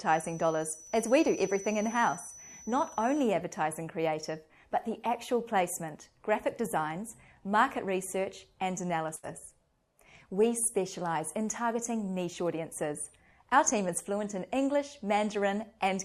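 Right around 9.15 s there's a burst of packet loss, running to about 9.25 s. A short run of packets never made it in time, so the receiver papered over the hole by carrying the last bit of sound forward for roughly 77 ms and letting it sag in level as it went. You hear that as a brief smeared, fading hold. When the audio picks back up, about 80 ms of the original is gone, so it jumps ahead slightly.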